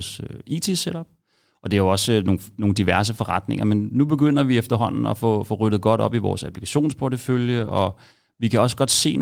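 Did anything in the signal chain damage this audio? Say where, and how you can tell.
Yes. The damage happened at the network stage, with the codec covering for it. From 7.59 to 7.69 s the speech turns briefly rougher and noisier but never drops out, which is the signature of a lost packet rebuilt from error correction. The packets following the lost ones carried low-bitrate copies, and the Opus decoder played those instead. About 60 ms of audio is degraded this way, which fits roughly three 20 ms packets lost.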